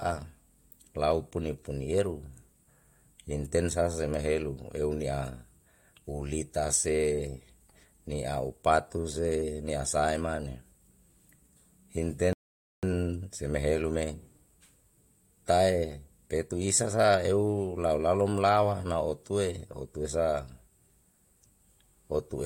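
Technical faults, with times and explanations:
12.33 to 12.83 s, rebuffering stall: the speech stops dead and the line goes silent for about half a second, then picks up again at exactly the point where it broke off. The player had played through everything it had downloaded and had to wait for more data before it could go on. What marks this out from a dropout or packet loss is that no speech goes missing. The speech continues intact. The only change is the half second of time added to the clip.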